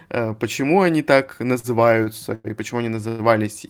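Three short stalls from late packets come first, at 1.59 to 1.67 s, 2.04 to 2.09 s and 2.34 to 2.47 s. Each time a packet had not arrived, the jitter buffer emptied, and the receiver held the last bit of speech to fill the wait, for 43 ms, 28 ms and 99 ms respectively. Nothing is lost; each syllable is simply drawn out, with a slight buzz or dip. On a spectrogram these show as brief horizontal smears where the harmonics freeze flat. In the waveform the cycles repeat almost identically, and the audio after each one sits slightly later.

A call audio freeze follows at 3.08 to 3.22 s. The speech halts and is carried on as a fading buzz or hiss for about 105 ms, never reaching silence, before resuming where it stopped with nothing missing. The likely cause is packets held up in transit, which drained the jitter buffer. The spectrogram shows a longer frozen band that gradually thins. The waveform shows a repeating, decaying pattern ahead of the resumed speech.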